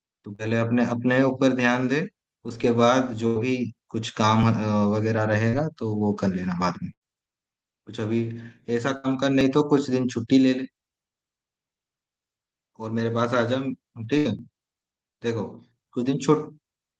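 At 0.35 s and again at 5.49 s, short concealed packet loss occurs: about 40 ms of the call arrives too late, and the decoder bridges roughly 33 to 35 ms by extending the preceding sound before blending back, leaving a brief smear or wobble.

Bursts of packet loss occur at 3.27 to 3.38 s, 6.93 to 7.04 s, 8.97 to 9.07 s and 14.18 to 14.28 s. Each time, about 80 ms goes missing in a row, and the receiver stretches the last sound for 71 to 86 ms while fading it. This is heard as a held buzz or dying hiss, after which the speech jumps ahead with that stretch gone.

At 4.43 s, 9.41 s and 14.39 s, audio is missing between chunks. The spacing of about 5 s points to a recorder working in 5-second blocks and likely dropping around 20 ms at each handover. The two sides butt together, so each seam is a small skip, possibly with a click. Throughout, the call path's codec limits the top end to about 12 kHz.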